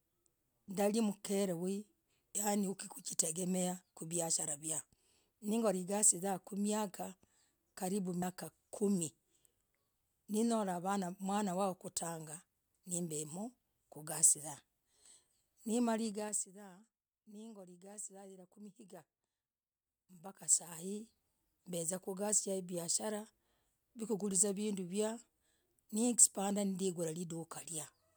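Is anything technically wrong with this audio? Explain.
Yes. At 8.21 s there is damaged data in the compressed stream: the decoder lost sync, leaving a brief disruption, seen as a broadband smear with a waveform discontinuity.

Zipper noise runs from 16.08 to 16.50 s, where the level drops about 15 dB in 3 dB steps at roughly ten per second. It appears again from 19.72 to 21.14 s, rising about 15 dB in 3 dB steps at roughly four per second. Each unsmoothed gain step ticks audibly over the speech. The steps show as a staircase envelope in the waveform and as thin vertical lines in the spectrogram.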